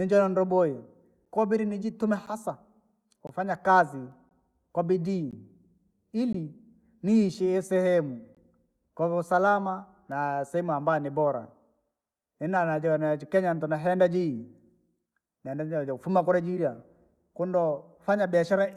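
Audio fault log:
1.25 to 8.35 s, gap between stream segments: at 1.25, 2.26, 3.27, 4.29, 5.31, 6.33, 7.34 and 8.35 s, one-second segments are time-stamped slightly apart and the player fills each space with silence. The speech cuts out abruptly for 4 to 19 ms, roughly once a second, with nothing lost.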